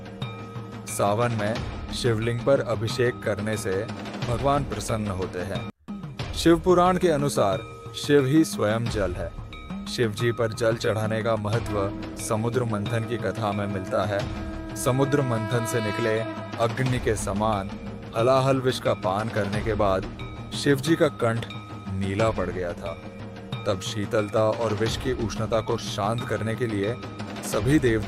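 Nothing in the audio stood out as a technical problem on listening.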